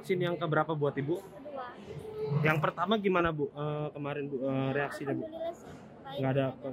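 Nothing goes wrong anywhere in this one, so there's no fault to point to at any moment.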